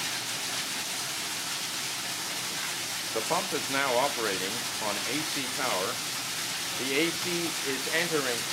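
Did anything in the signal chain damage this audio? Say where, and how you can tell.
No, nothing in the signal chain damaged this audio.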